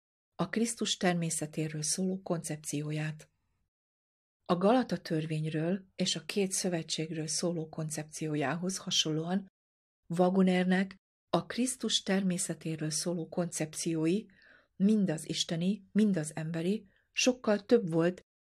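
No technical faults can be heard anywhere in the recording. The speech runs on without any break or defect that calls for comment.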